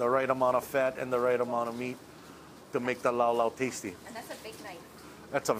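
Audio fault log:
4.05–4.07 s, compressed frames skipped: about a tenth of a second of audio is missing, a few compressed frames lost. The audio jumps ahead at the join, seen as a brief spectral discontinuity.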